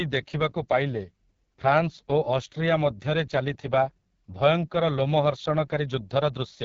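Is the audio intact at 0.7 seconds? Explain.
No. At 0.7 seconds the speech sounds rough and raspy, with nothing above about 7.5 kHz, as it does throughout. This is AMR wideband (HD Voice) codec damage: a pulse-driven vocal tract model coding speech at very low rate, consistent with the 6.6 kbit/s mode.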